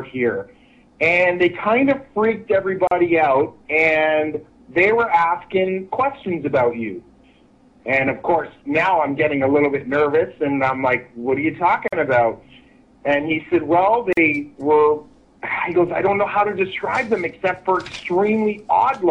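A gap at a join of encoded pieces appears three times: at 2.87 to 2.91 s (40 ms), 11.88 to 11.93 s (about 47 ms), and 14.13 to 14.17 s (44 ms). The audio was encoded in separate segments and joined without trimming each run's leading encoder delay and padded final frame, so short silences drop into continuous sound. Each has smeared edges, and the sound then resumes exactly where it broke off.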